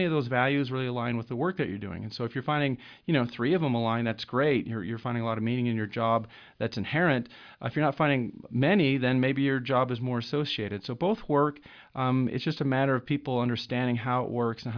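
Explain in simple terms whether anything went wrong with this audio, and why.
Nothing went wrong with this recording, as the speech signal stays steady and intact throughout, with no technical faults to be heard.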